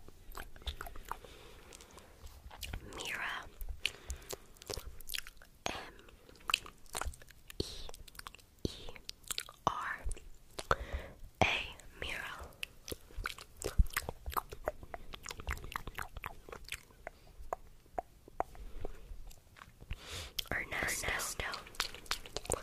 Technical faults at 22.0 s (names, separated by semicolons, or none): doubled audio track